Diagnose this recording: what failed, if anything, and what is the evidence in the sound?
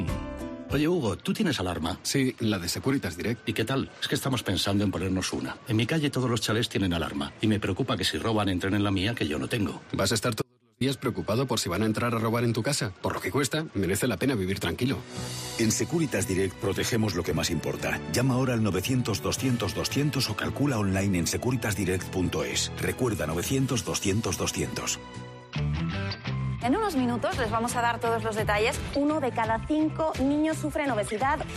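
An audio dropout to a faint residue occurs at 10.42 to 10.81 s. The sound cuts abruptly for about 390 ms, leaving only a faint leak about 40 dB below normal level, then snaps back. This is likely an intermittent analogue connection that briefly opened while the downstream path stayed live.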